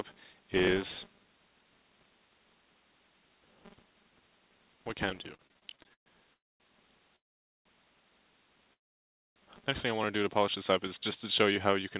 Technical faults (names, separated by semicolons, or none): filter restarted on every block; repeated stalls (stutter); call audio freeze